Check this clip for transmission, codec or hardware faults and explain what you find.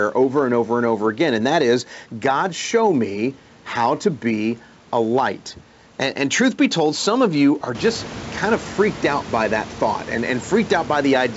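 No transmission, codec or hardware faults.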